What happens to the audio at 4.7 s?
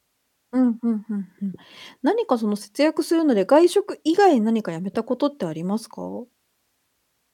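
Nothing goes wrong at 4.7 s: the speech runs on intact through that moment, with no dropout, click, distortion or other fault to be heard.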